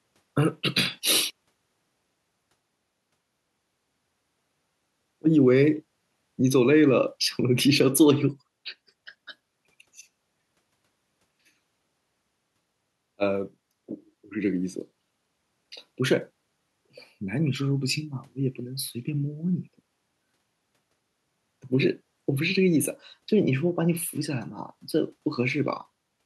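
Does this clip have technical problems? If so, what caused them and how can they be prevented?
No, this clip has no technical problems, so there is nothing to trace back to a cause or prevent.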